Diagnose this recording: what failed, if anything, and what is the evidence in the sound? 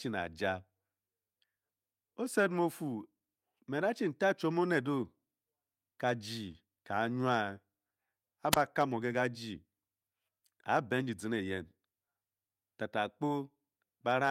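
The analogue wireless link failed: a wireless microphone squelch dropout at 8.51 to 8.56 s. The RF signal faded until the receiver's squelch cut the output, so the speech gives way to a short burst of hiss and then a near-silent hole of about 26 ms before resuming.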